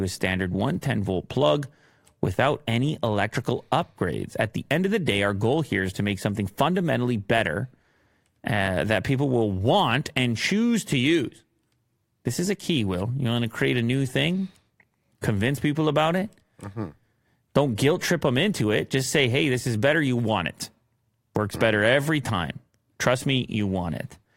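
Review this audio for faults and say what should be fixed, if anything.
Nothing to fix: no faults found on review of the speech.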